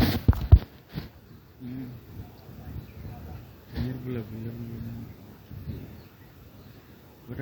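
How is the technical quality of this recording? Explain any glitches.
No glitches can be heard anywhere in the recording, and the signal stays steady and intact throughout.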